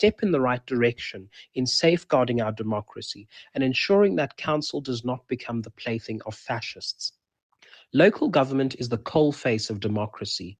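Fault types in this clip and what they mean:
Noise suppressor applied to music or sounds: throughout, a speech-tuned suppressor mistakes steady tones and decaying tails for noise, pumping the level by around 5 dB.
Sound cut by the noise suppressor: at 1.13–1.35 s and 3.14–3.56 s, the suppressor judged the sound to be noise and pulled it down by about 10 dB.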